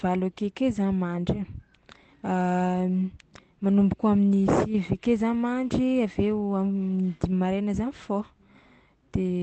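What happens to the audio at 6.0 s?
Nothing goes wrong at 6.0 s; the speech runs through intact, with only the steady coding character and limited top end of the call path it travelled through.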